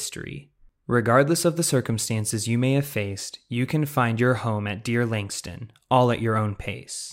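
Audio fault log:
Nothing stood out on listening to the speech.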